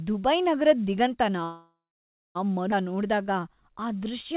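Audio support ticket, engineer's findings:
Call audio freeze, 1.44–2.37 s: sound stalls for 0.91 s, the last sound carried on as a fading buzz or hiss, then about 0.59 s of silence before resuming with nothing lost. Likely packets held in transit, jitter buffer ran empty, gap inserted.

Skip ahead, 2.71–2.74 s: playback jumps forward almost seamlessly, roughly half a second of speech gone. Later audio was already queued; the stretch was dropped in transit or by the jitter buffer on overflow, splicing the two sides together.

Jitter buffer slow-down, 2.88–4.33 s: speech runs at 91% speed, same pitch, sounds drawn out. The buffer repeated single pitch periods and pause fragments, adding 130 ms to rebuild its reserve. The G.711 mu-law call path shows its usual band limit, nothing above 4 kHz.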